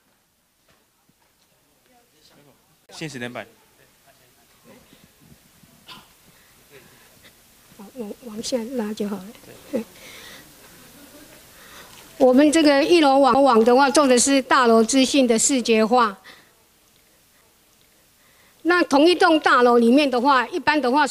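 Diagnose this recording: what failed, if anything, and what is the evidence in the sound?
The playback stage failed: three CD skips, at 2.86 to 2.89 s, at 13.34 s and at 17.41 s. Each is a tick and a brief mute, about 30 ms at the first, about 10 ms at the second and only a couple of milliseconds at the third, after which the sound resumes from a different point. The laser has jumped between turns of the disc's spiral, so the player loses its place, silences the output and picks up elsewhere on the disc. On a waveform each appears as a short flat gap with a discontinuity at its edges. On a spectrogram each shows as a thin vertical broadband line where the material on either side fails to match.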